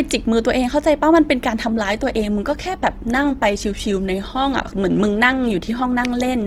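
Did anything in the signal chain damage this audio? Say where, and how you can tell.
Yes. The damage sits at the codec stage, in an adaptive stream switching to a lower bitrate. At 1.66 s the speech abruptly takes on more audible codec artefacts. This degraded quality persists to the end of the clip, and there is no gap at the switch. That sudden, seamless change fits the player stepping down from an Opus stream near 64 kbit/s to one near 16 kbit/s after the connection slowed.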